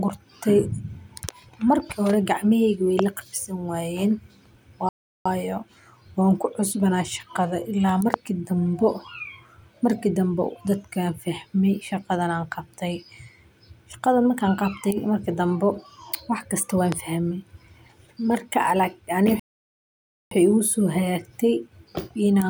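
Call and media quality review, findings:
Loud pop: sharp single pops over the speech, which continues underneath. 2.99–3.01 s just before "la qab" and 8.14–8.16 s (about 20 dB up); 16.92–16.94 s after "wax kasto wan". Peaks roughly 15 dB above the speech. Likely a voltage pulse from a switch, static or driver glitch.

Playback stall: speech cuts to silence mid-flow, 4.89–5.26 s (0.37 s) and 19.40–20.31 s (0.92 s). Likely the player running out of buffered data or its thread blocking until recovery.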